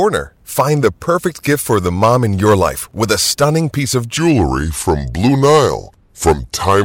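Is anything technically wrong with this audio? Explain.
Yes, there are two faults.

Hard clipping runs through the whole speech clip. The signal is driven about 7 dB past what a stage in the chain can pass, so the loudest peaks, a small share of samples, are sliced flat. Those squared tops add high harmonics, heard as crackle and grit on louder syllables.

A section at the wrong speed begins at 4.18 s, just after "a stunning piece of", and lasts to the end. That stretch plays at about 0.81 times normal speed, likely because it was fitted to the wrong clock. Pitch falls about four semitones along with the tempo, so the voice turns deep and dragging.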